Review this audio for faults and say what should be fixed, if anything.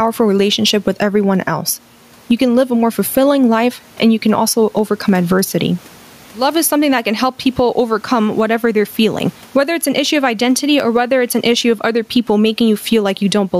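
Gain pumping runs through the whole recording: the room noise sits about 38 dB below the speech, with the level moving by roughly 10 dB. The likely cause is an input gain set far too high, with a fast limiter or compressor clamping down on each peak. A waveform shows a flattened, even envelope with the noise floor rising between phrases; a spectrogram shows the background band brightening in gaps and dimming under speech. Lowering the microphone gain so peaks stay well below the limiter threshold would prevent it.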